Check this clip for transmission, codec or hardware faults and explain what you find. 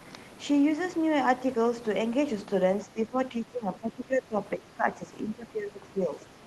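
Two stretches of the speech are pushed down in level, from 2.85 to 4.37 s and from 4.57 s to the end. The likely cause is speech suppressed in double talk. While the far side was also talking, the echo canceller could not separate the near talker from loudspeaker echo, so it attenuated both. The first dip reaches about 15 dB, the second about 10 dB. Unlike packet-loss gaps, the voice here dips in level across these stretches.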